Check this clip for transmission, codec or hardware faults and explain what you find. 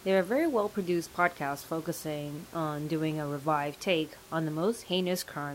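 Checking this clip turns up no faults.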